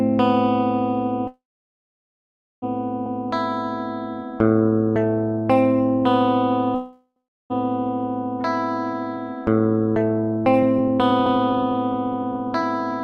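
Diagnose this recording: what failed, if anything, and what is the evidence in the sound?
Call audio freeze, likely from packets stalling on the network: the sound decays to silence from 1.27 to 2.64 s and 6.75 to 7.52 s, then resumes where it stopped.

Overlapping chunks at the processing buffer stage: each 4 s chunk starts early, so 100 ms replays as a stutter at 3.06, 7.16 and 11.26 s.

Jitter buffer speed-up in call processing: from 8.93 s to the end, short pitch periods are cut to shed delay, so the sound runs about 9% faster at unchanged pitch.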